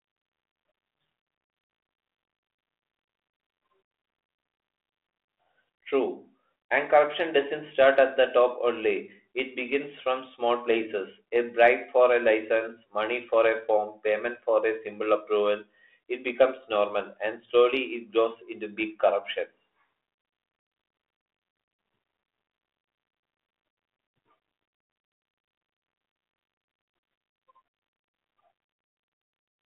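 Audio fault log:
24.26–24.30 s, bit errors on an ADPCM link: brief pop and rough burst with a level jump, as flipped bits, roughly 0.2 percent, derail the decoder's step size and predictor.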